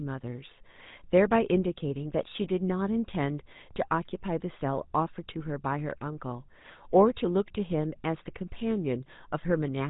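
From start to finish the speech carries the sound of the GSM full-rate codec. Its damage is plainly audible. The voice has a buzzy, gravelly edge. That roughness comes from the codec's model of the voice. It rebuilds the vocal tract and drives it with evenly spaced pulses, coarsely kept. Nothing survives above about 3.8 kHz, so the top end is gone. The grain fits a bitrate near 13 kbps.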